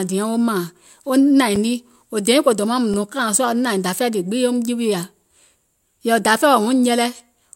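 Two brief ticks cut through the speech, at 1.56 s just before "nii wò dèiŋ ko" and at 2.94 s right after "dèiŋ ko dòmaŋ mùŋ". Each is a block of digital silence, about 5 ms and 1.6 ms long, where the sound dropped out abruptly, most likely from a missed buffer fill.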